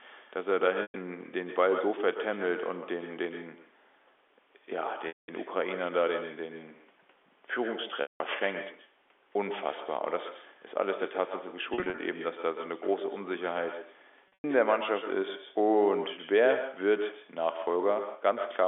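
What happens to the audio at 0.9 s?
At 0.9 s the audio is inside a stretch of packet loss with pitch repetition running from 0.82 to 0.94 s, about 120 ms of missing signal. The receiver filled the hole by looping the last pitch cycle it had, so the sound briefly locks into a held, buzzy tone that decays toward silence before the real signal cross-fades back in. That smoothed, tonal fill is what separates it from a plain dropout, which would cut to abrupt silence or a click.

The same moment also carries the echo with no canceller that runs through the whole clip. The far end's loudspeaker feeds its microphone and nothing strips it out, so a copy about 10 dB quieter returns after roughly 150 ms, thinner than the original. Its distinct delayed repeat, rather than a smooth tail, marks it as network echo instead of ordinary room reverberation.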